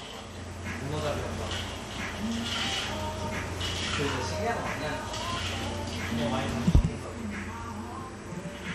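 USB whine runs throughout: a fixed 8 kHz tone, roughly 30 dB below the sound, from 125-microsecond bus microframes drawing current that leaks through power or ground.

MP2 compression, likely the cause, is also present throughout: nothing survives above 14.2 kHz, and the remaining bands sound dull, gurgling and granular, which fits a low bitrate near 64 kbps.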